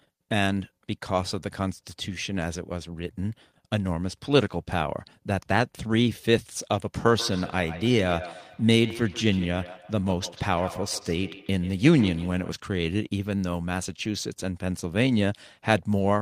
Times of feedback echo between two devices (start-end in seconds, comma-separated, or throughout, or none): 7.08-12.62